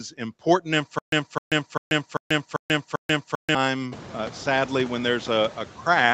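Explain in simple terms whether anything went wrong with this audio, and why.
Two things went wrong. From about 0.99 to 3.55 s there is a stutter with silent gaps: the same quarter-second snippet plays six times, each followed by dead silence, until "uh sadly when." It is most likely a stalled stream replaying its last piece, and unlike a dropout, the repeats come at an even beat.

Throughout the clip, noise suppressor artifacts make the background noise sink between words and rise under them, rather than the noise simply staying steady.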